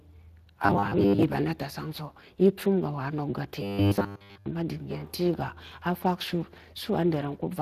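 The speech passes through the Speex codec for its whole length. Its CELP model has too few bits to rebuild the excitation cleanly, so the voice sounds hoarse and grainy throughout, with audible coding damage. The upper band is only a thin, noise-like fill that stops at about 15.2 kHz. That fits a Speex mode running at roughly 22 kbps.

From 0.66 to 1.23 s, playback likely ran short of fresh data and kept repeating the most recent 10 ms block instead of moving forward. This is robotic sound from repeated short buffers. Most of that stretch is repetition, so the speech collapses into a rigid, metallic buzz pitched at 100 Hz that still roughly tracks the syllables. From 3.63 to 4.47 s the same repetition takes over the whole stretch, and the voice becomes a 100 Hz drone that follows the original only roughly.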